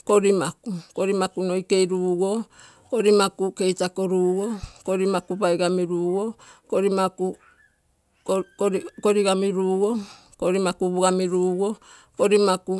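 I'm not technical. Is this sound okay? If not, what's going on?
Yes, nothing in this recording sounds wrong.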